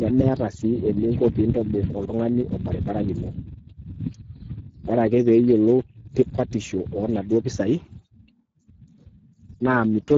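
Speech clip carrying plainly audible Speex codec damage throughout: the excitation sounds starved of detail, giving a coarse, noisy texture consistent with a low bitrate near 10 kbps, and the wideband mode leaves nothing above 7.7 kHz.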